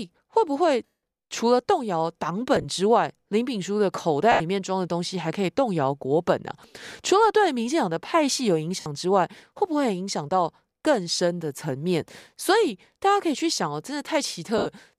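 Lost LE Audio frames break up this speech clip at 0.86–0.97 s (about 170 ms lost), 2.56–2.65 s (40 ms scattered over 80 ms in short runs of around 20 ms), 4.32–4.41 s (80 ms), 8.80–8.86 s (60 ms) and 14.58–14.67 s (80 ms). At each gap the decoder repeats the last spectrum with randomised signs, so the sound smears into a noisy blur and fades on the longer losses. The gap lengths fit whole 10 ms frames, and the light, slightly grainy edge elsewhere is likely from the Bluetooth LC3 compression.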